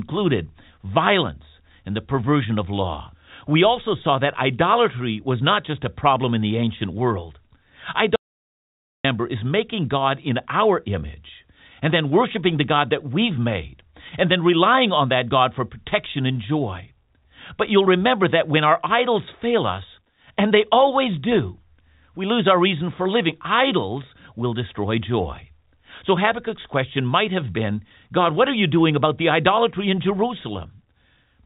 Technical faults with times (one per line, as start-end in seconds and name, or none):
8.16-9.04 audio dropout to silence
12.64 bit errors on a digital phone line